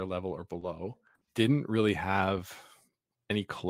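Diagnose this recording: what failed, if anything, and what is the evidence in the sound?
Network loss, recovered in the codec. At 0.31 s and 0.61 s, just after "level or", a lost packet rebuilt from error correction sounds rougher and noisier for 20 ms. The decoder played the low-bitrate copy carried in the next packet.

Network stage. At 0.59 s and 1.25 s there is short concealed packet loss. Each 20 ms hole is a brief smear. The decoder extended the last sound, then blended back.

Network stage again. From 1.15 to 1.23 s, just before "didn't really have", a burst of packet loss removes 60 ms. The last sound is stretched and faded, and that audio never returns.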